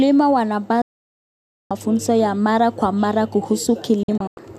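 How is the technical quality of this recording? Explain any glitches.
The recording has two digital broadcast dropouts. From 0.82 to 1.71 s the speech mutes almost instantly, with about a 3 ms fade, and resumes at "ya mara kwa mara". From 4.03 to 4.38 s there are several short holes, the longest 96 ms. The receiver stopped getting valid frames and muted until good ones arrived. The hole lengths fit frames of about 24 ms. Packet-loss concealment would fill the gaps with smeared sound. Here the gaps are clean silence, and the missing speech is gone.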